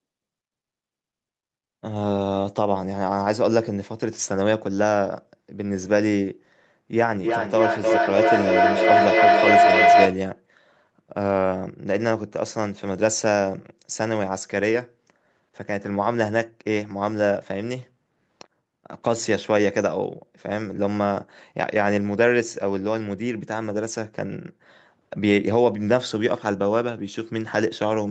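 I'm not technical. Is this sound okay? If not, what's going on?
No. From 6.93 to 10.31 seconds there's feedback howl: two devices in one room shared the call, so each microphone caught the other's loudspeaker, looping sound around louder each pass. It becomes a whistle near 700 Hz, with the sound coming back around about every 0.3 seconds, louder than the speech.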